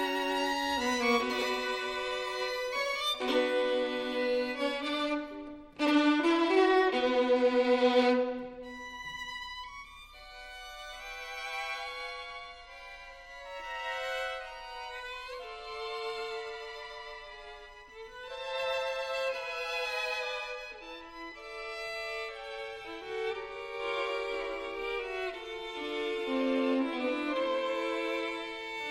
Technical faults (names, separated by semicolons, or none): none